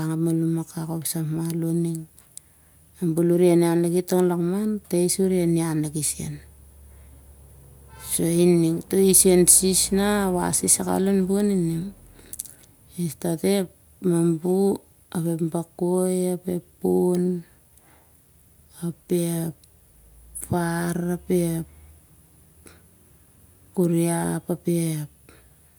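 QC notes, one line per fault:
No faults turned up here, so there's nothing to flag on this one.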